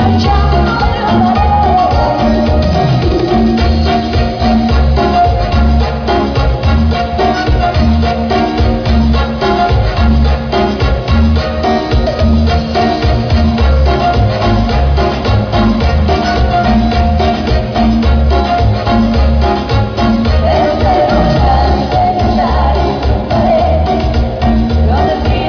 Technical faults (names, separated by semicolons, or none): none